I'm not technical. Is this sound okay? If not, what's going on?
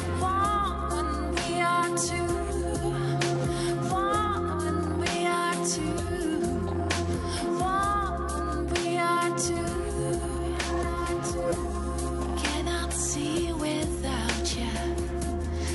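Yes, no faults heard here.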